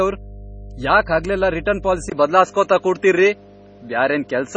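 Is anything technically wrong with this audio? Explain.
Yes, four faults can be heard.

Mains hum runs throughout: a steady 50 Hz tone from power-line coupling, roughly 15 dB below the speech. Because it is fixed in pitch and never varies, it stands apart from room rumble.

The whole clip also has a watery, swirly quality with nothing above 9 kHz. This is heavy damage, likely from MP3 compression at a low bitrate around 24 kbps, where weak frequency lines drop in and out from frame to frame.

At 1.65 s, just after "ಯಾಕ್ ಹಗಲೆಲ್ಲಾ", there is pre-echo: a 13 ms hiss just before an attack. The codec spread its block noise into the quiet moment ahead of the attack. This differs from a click because it rises into the onset.

At 2.10 s the input switched to a poorer device, likely another microphone. A 20 ms gap marks the switch. After it, the band stops at 7.6 kHz, the level shifts by roughly 5 dB and new noise sits roughly 40 dB down. 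The change is abrupt, unlike gradual codec dulling.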